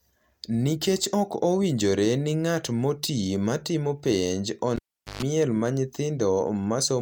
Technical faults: cable pulled and plugged in

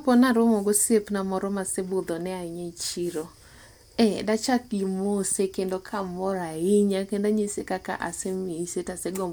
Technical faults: none

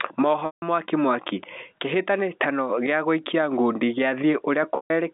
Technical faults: packet loss with pitch repetition

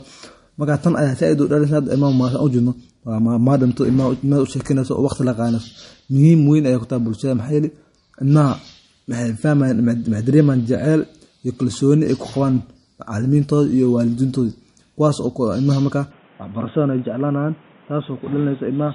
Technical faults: low-bitrate audio saved at a high bitrate; input switched to a poorer device

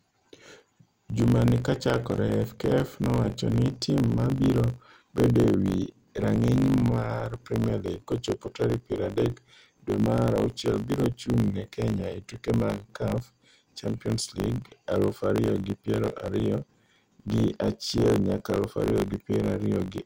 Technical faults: block size mismatch (truncated)

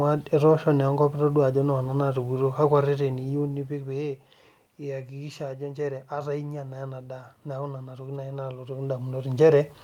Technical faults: none

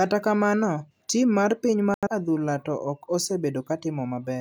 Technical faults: digital broadcast dropout

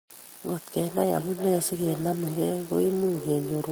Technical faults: feedback echo between two devices

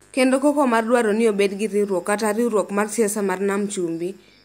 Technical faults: mains buzz

